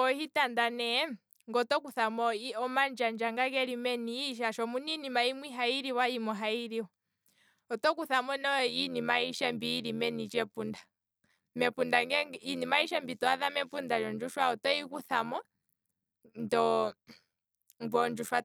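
From 8.67 s to the end, overlap-add ripple: mismatched frame overlap swings speech level about 11 dB around 100 times a second, a metallic buzz showing as regular envelope notches and vertical spectrogram banding.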